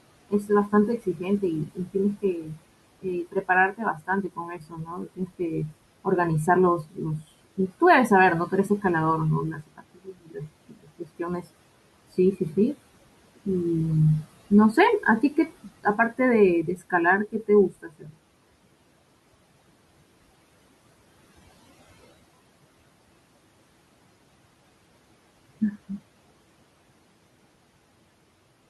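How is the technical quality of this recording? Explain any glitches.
The recording is limited by aggressive noise suppression, which both colours the background and swallows parts of the speech.

Noise suppressor artifacts run throughout. The suppressor pulls steady-noise bands down by about 21 dB frame by frame, so the room noise, about 18 dB below the speech, sinks between the words and rises under them.

Speech cut by the noise suppressor occurs at 0.29–8.84 s, 9.53–11.48 s, 14.24–18.18 s and, more lightly, 25.61–25.99 s. The suppressor mistakes quiet speech for noise and drops it by up to about 22 dB, so soft consonants and endings sound swallowed. This affects roughly two seconds of the first stretch.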